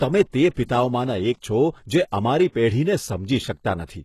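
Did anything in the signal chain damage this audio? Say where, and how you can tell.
Yes, at the codec stage, throughout the speech. The treble stops dead above 12.3 kHz, and the sibilants sound gritty and metallic, which fits a bitrate around 16 kbps. The likely cause is HE-AAC compression, whose band replication rebuilds the upper spectrum from copied lower bands.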